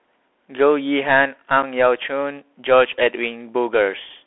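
Bluetooth CVSD headset codec, throughout: the speech has passed through the narrowband headset link, whose sound fits a 64 kbps CVSD stream. Each sample is coded as a single up-or-down step of adaptive size, and the band sits between 250 Hz and 3.4 kHz with everything above gone. The damage is plainly audible: loud, bright moments outrun the step size and distort, sibilants come out scratchy, and a grainy hiss runs beneath the speech.

Unconcealed Bluetooth headset packet loss, at 1.62 s: about 7.5 ms of audio drops out, which fits a single lost packet between headset and phone. Nothing was done to conceal the gap. Silence or an idle pattern filled it instead, so the speech is cut by a brief hole with hard edges that can click. Because the link is CVSD, the speech resumes quieter for a moment while the codec's step size rebuilds.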